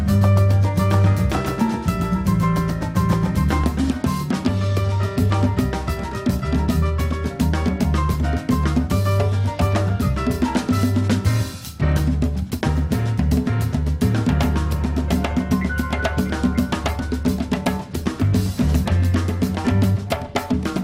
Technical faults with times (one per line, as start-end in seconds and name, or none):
0.00-3.64 doubled audio track